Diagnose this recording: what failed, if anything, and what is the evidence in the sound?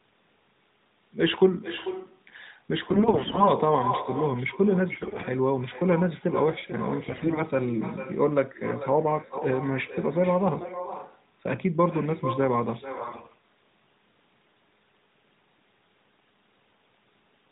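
Echo with no canceller, at the call-processing stage: throughout the speech, every phrase is followed by a quieter, thinner copy arriving roughly 400 ms later at about 12 dB below the talker. That delay is a network round trip, so the far end is replaying the call through a loudspeaker into its open microphone, and no echo canceller subtracts the returned signal before it is sent back.

AMR bit errors, on the radio link feeding the codec: the speech turns hoarse, scratchy and gargly in five bursts, 2.84–3.52 s, 4.92–5.28 s, 7.02–7.44 s, 10.58–10.74 s and 12.98–13.44 s, while pitch and level roughly hold. That points to a weak link corrupting the less-protected bits of each frame, around a tenth of them, so excitation pulses and fine gain and spectral values decode wrongly, while the checked core bits pass and the frames are not discarded. The narrowband AMR channel underneath, at 12.2 kbps, contributes its usual band limit below 4 kHz.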